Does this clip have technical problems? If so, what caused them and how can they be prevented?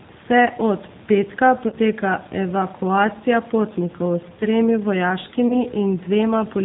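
Yes. The whole clip carries G.729 codec damage, and it is plainly audible. The speech is rebuilt from a vocal tract filter, a pitch predictor and a few pulses per frame. The result sounds slightly rough and synthetic, with no content above 4 kHz. The quality fits an 8 kbit/s codec. The room noise, about 23 dB below the speech, takes on some of this warble. To prevent it, use a wideband codec such as G.722 or Opus at a higher bitrate.

There are also two events of VoIP packet loss concealed by the speech codec. The first runs from 1.68 to 1.76 s, right after "od petka". About 40 ms of audio is missing there, which fits two lost 20 ms packets. The second runs from 5.48 to 5.64 s. It lost about 20 ms, which points to a single packet. In each case the decoder extends the last sound into a fading buzzy tone or coloured noise. The speech stays weak or distorted for a while after packets resume, because each frame builds on the one before. 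To prevent it, fix network congestion, prioritise voice traffic with QoS, and use a larger jitter buffer or forward error correction.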